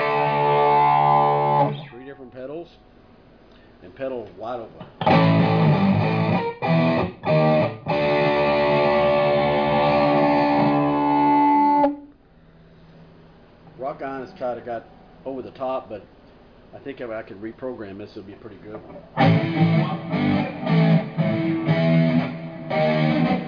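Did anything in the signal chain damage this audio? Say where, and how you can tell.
No, nothing along the chain from capture to playback has left any audible damage on this audio.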